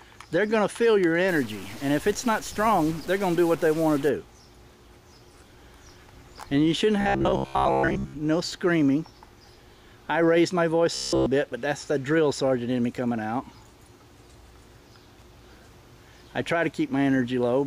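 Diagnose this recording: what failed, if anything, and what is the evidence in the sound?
From 1.28 to 4.09 s, a stuck bit adds a noisy distortion that follows the waveform. The likely stage is the converter or its data wiring. One data bit holds a fixed value, so about half the samples are off by that bit's weight.

From 7.01 to 8.13 s and 10.95 to 11.26 s there is robotic sound from repeated short buffers. A rigid 66.7 Hz buzz follows the audio only roughly. That rate fits a 15 ms block being replayed. Most of the first span is repeated, and all of the second. This likely points to the driver or buffer stage, where audio arrives too late and the last block is replayed.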